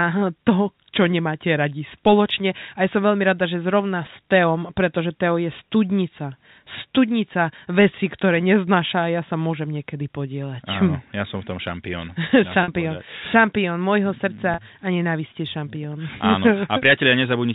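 At 12.63 s, about 50 ms of the speech drops out. At 14.54 s, about 40 ms more goes. This is packet loss with pitch repetition. The receiver fills each gap by repeating the last pitch period, so both sound like a brief buzzy hold. Each gap fits four or five 10 ms packets.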